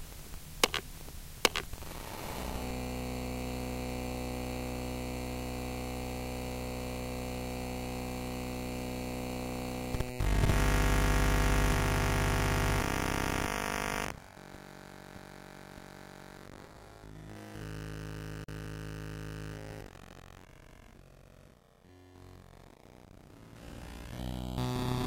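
A recording of sounds, with one clear glitch: a block of digital silence from about 18.44 s to 18.48 s, roughly 42 ms long. For that stretch the sound just drops to silence, cutting out and coming back with no fade at either end, so you hear a short hole in the sound.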